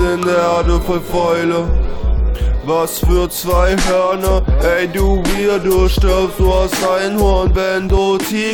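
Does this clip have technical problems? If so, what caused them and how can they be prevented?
No, nothing stood out on listening to this clip.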